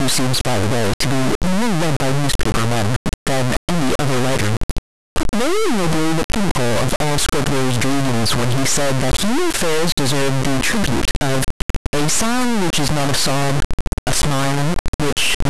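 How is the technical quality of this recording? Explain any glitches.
The technical quality is very poor: an integer read as float fault runs through the whole speech clip. The sample data appears to have been stored as 32-bit integers but decoded as 32-bit floating-point numbers, so each bit pattern becomes a meaningless value: nearly zero, invalid, or hugely beyond full scale. The output therefore slams between silence and the clipping limit, producing an extremely loud, harsh buzz like a square wave wherever there is signal, dropping to silence in the quietest passages.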